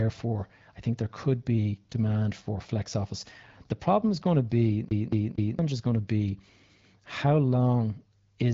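A speech recording with a CD stuck on one turn from 4.89 s to 5.59 s. Right after "is going to be", a slice of about 0.23 s plays again and again, three times, with a brief mute at each jump. Then the sound resumes with "is going to be". The stutter is fast and even, like a skipping disc. A scratch likely sends the laser back one track at the same spot on each revolution. The audio carries light wideband phone-codec colouring, with nothing above about 7.6 kHz.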